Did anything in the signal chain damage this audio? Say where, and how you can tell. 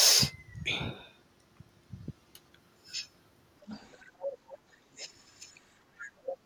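Yes. A faint second voice surfaces under the speech at 3.66–3.94 s, 4.49–4.58 s, 6.0–6.1 s and 6.26–6.37 s. It sits roughly 20 to 25 dB below the talker, except for the last scrap, which comes up to about 10 dB below. This is the other side's voice leaking through, a call-processing fault. The far end's audio was played on the talker's loudspeaker, picked up by the microphone, and likely not fully removed by the echo canceller.

The talker's own speech sags sharply from 4.07 to 4.78 s, dropping by roughly 25 dB at its deepest, and dips again more gently, by a few decibels, at 4.97–5.06 s. The first dip overlaps one of the leaked fragments. This is speech suppressed in double talk, also in call processing. With both sides active at once, the echo canceller likely could not separate the near talker from the echo, so it attenuated everything in those stretches.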